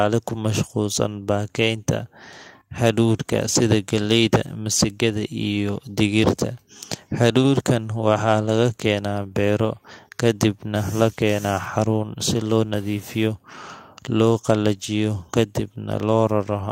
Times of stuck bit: 12.77-13.27

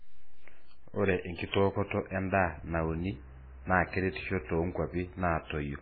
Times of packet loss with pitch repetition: none

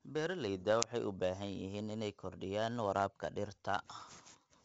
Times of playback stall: none

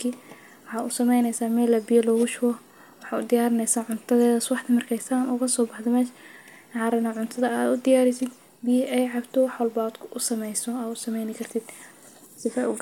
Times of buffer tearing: none

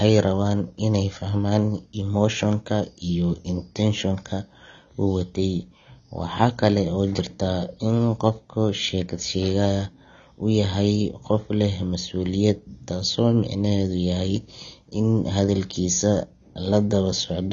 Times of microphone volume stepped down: none

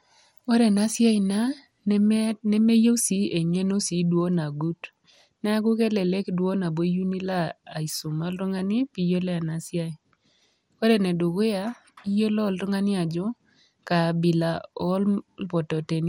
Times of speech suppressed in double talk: none

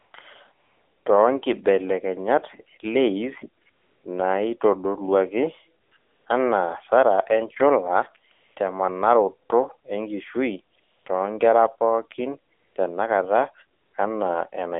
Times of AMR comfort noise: 0.00-0.14, 0.52-1.06, 3.64-4.04, 5.82-6.26, 8.32-8.56, 10.76-11.06, 12.54-12.76, 13.78-13.94

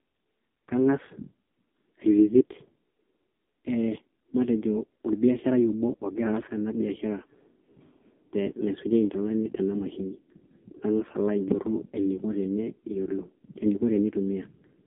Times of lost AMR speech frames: 3.22-3.24

